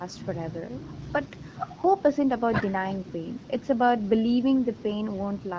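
No technical faults are audible anywhere in this recording.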